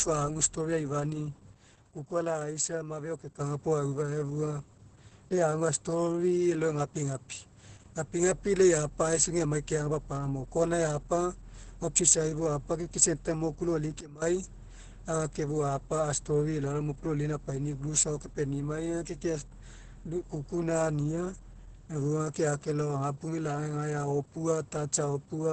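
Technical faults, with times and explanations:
Throughout, Opus voice compression: The speech sounds muffled, hoarse and slightly robotic. This points to Opus running its SILK speech coder at a very low rate, which fits about 10 kbps. The coder keeps a wideband voice band and throws away everything above about 8.7 kHz. On a spectrogram the energy stops at a hard ceiling near 8.7 kHz, and the harmonics look smeared and blocky in time, consistent with 20 ms frames.
1.55–3.40 s and 14.01–14.22 s, sudden gain jump: In both spans the level drops abruptly and then returns abruptly, with no fade in either direction. The first drop is about 6 dB and the second is about 17 dB. Speech and background noise fall and recover together, which likely means a digital gain setting was switched instantly rather than ramped. On the waveform the envelope shows sharp rectangular steps down and back up. The spectrogram shows matching vertical edges across all frequencies.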